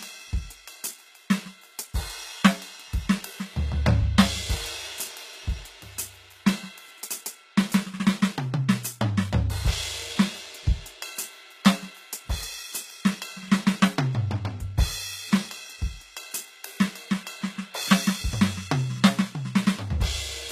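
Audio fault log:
Throughout, likely HE-AAC compression: the music carries plainly audible codec damage and nothing above 14.9 kHz. The treble sounds copied up from lower bands rather than captured, so high content turns gritty and metallic, which fits a bitrate around 20 kbps.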